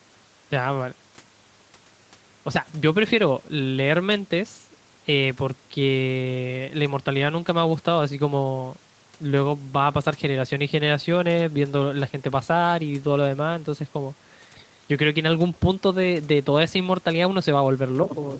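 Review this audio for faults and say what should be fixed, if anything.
Nothing stood out on listening, so there is nothing to fix; the speech's upper limit of about 8 kHz is simply what the call path passes.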